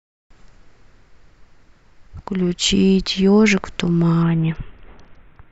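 A speech clip with a Bluetooth SBC bit pool drop near the end. From 4.23 s to the end, about 1.3 s later, the treble suddenly goes dull and a gritty, grainy noise rides on the speech. The link stays connected and the audio keeps flowing. The sound points to the encoder cutting its bit pool sharply, from around 28 to about 6. That fits a rate near 60 kbps. So few bits leave the top sub-bands almost empty and the rest coarsely quantised. The rate does not recover before the clip ends.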